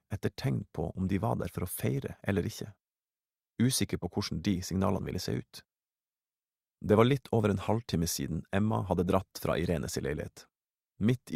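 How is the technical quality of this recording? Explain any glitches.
Nothing in the signal calls for comment: there are no glitches to explain, and the audio carries on steadily with no technical disturbance anywhere.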